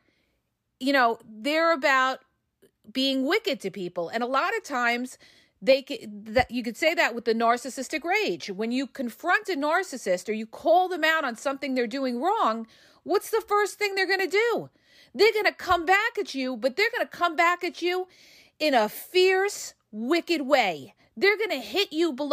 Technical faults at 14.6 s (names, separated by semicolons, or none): none